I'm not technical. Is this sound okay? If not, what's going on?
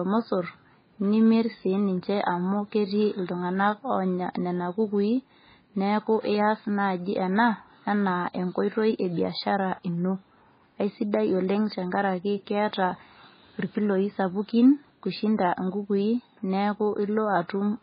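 No. The whole recording has the sound of heavy MP3 compression, which is likely the cause. The file was probably squeezed very small, so little detail survived. Everything above about 5 kHz is gone, so the speech sounds dull and muffled. The s sounds turn swishy and metallic. Quieter parts seem to bubble or swirl, because faint details keep dropping in and out. Sharp starts of sounds come out smeared rather than crisp.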